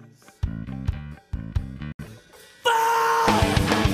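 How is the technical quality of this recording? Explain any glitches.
The recording has two faults: a regular series of clicks and one short gap of silence.

Word clock ticks, from 0.92 to 3.45 s: a receiver running on its own unlocked clock slips one sample roughly every second, producing about four sharp ticks.

The dropout at 1.92 to 1.99 s is a 70 ms hole, after which the audio resumes further along, likely a Bluetooth dropout of late, discarded packets.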